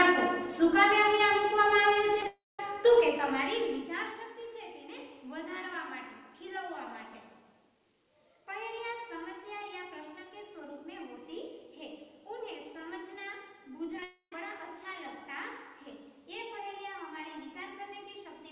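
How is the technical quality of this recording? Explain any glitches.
Two clusters of network faults break up an otherwise band-limited call path. The G.711 A-law coding holds nothing above 4 kHz, so the spectrogram shows a hard ceiling there.

Short concealed packet loss occurs at 2.21 s and 2.23 s, then from 13.96 to 13.99 s and 14.00 to 14.03 s. Each time, 10 to 20 ms of audio failed to arrive, and the decoder extrapolated the preceding sound before blending back. You hear a tiny smear or wobble. On a waveform it looks like a brief patched section, and on a spectrogram like a slightly blurred sliver.

A long network dropout follows each cluster, from 2.26 to 2.60 s and from 14.04 to 14.33 s, likely caused by a run of lost packets. The concealment carries on the last sound as a fading buzz or hiss, then leaves near-silence, about 0.21 s and 0.11 s respectively. This appears as a flat gap in the waveform and an empty vertical band on the spectrogram, with audio resuming after the missing section.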